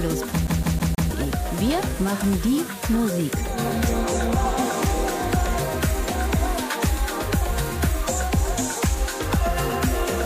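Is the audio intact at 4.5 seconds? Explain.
Yes, the audio is intact at 4.5 seconds, with nothing there that breaks, drops out or distorts the sound.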